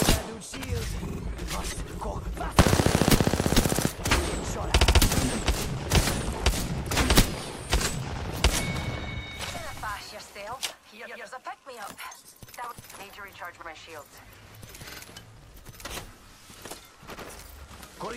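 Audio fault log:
1.09–1.19 s, 4.79–4.99 s, 11.06–11.24 s, 13.61–13.66 s, 14.89–14.98 s: repeated frames. Blocks of compressed audio 46 to 93 ms long were delivered again and replayed one to three extra times, causing a stutter and stretching the clip by about 0.6 s.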